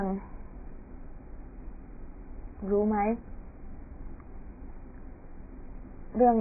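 AAC compression, throughout the speech: nothing survives above 2.5 kHz, so the sound is dull and muffled, with a smeared, warbling texture on vowels and sibilants. This heavy damage is likely from AAC-LC at a very low bitrate, around 12 kbps, dropping high bands.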